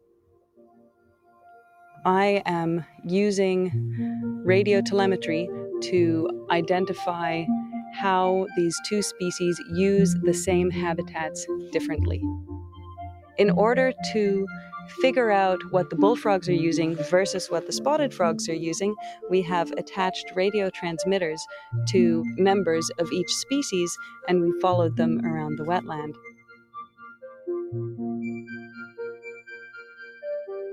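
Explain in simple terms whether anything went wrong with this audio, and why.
Yes, something went wrong. A noise suppressor built for speech was left on, so this is a noise suppressor applied to music or sounds. It mistakes steady, held sound for background noise. The level keeps swinging up and down by a fair amount, so the audio pumps and thins.

There are also six spots of sound cut by the noise suppressor: 0.0 to 1.45 s, 1.62 to 1.97 s, 2.86 to 3.04 s, 12.45 to 13.38 s, 26.13 to 27.47 s and 28.68 to 28.99 s. The deepest dips are at the start and near 26 s.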